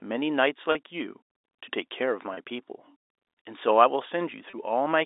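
Three short dropouts at 0.72–0.75 s, 2.34–2.37 s and 4.50–4.53 s show packet loss with pitch repetition: about 30 ms each, fitting one lost packet, bridged by repeating the last pitch period, so each is a brief buzzy hold in this band-limited telephone speech.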